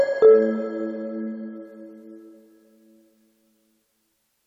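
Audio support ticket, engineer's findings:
Nothing stood out on listening; no symptom to log against any component.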